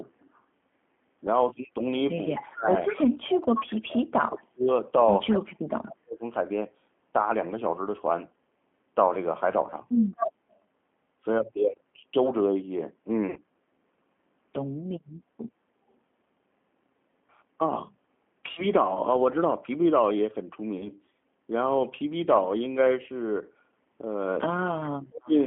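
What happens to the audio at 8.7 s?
At 8.7 s the speech carries G.729 codec damage, as it does throughout. Built from pulses and a vocal tract filter, it sounds rough and synthetic. Nothing above 3.4 kHz survives.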